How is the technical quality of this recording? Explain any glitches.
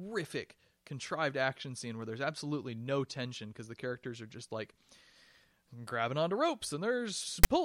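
The recording has one glitch, right at the end. File tags played as audio, at 7.44 s: text metadata decoded as samples produces a brief, hard-edged, loud rasp.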